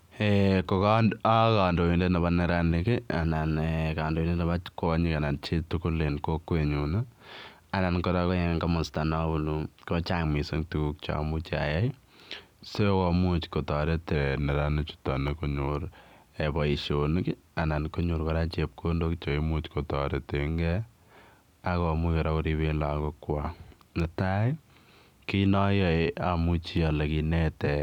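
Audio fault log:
3.25–4.86 s and 8.29–10.24 s, drift correction step: the speech runs 6.44% fast and about 108 cents sharp, then snaps back. The likely cause is clock-matching software changing the playback rate to drain its buffer. On a spectrogram, the harmonics jump upward together and compress in time. Waveform envelopes shorten.
14.15–15.68 s and 19.24–20.48 s, drift correction step: the speech runs 6.44% slow and 115 cents flat while the buffer likely refills. The harmonics drop and stretch, then return abruptly.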